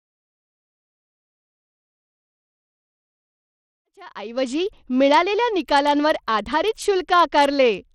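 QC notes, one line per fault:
Throughout: Bluetooth SBC compression, most likely, given how the speech falls apart up top. The treble keeps flickering in and out and there's a gritty, aliased grain riding on everything, which fits SBC starved at a low rate somewhere around 80 kbps. With that little to spend, the top sub-bands get almost nothing and the rest are quantised coarsely. The grit carries straight through the smooth fade-in that settles by about 4.85 s.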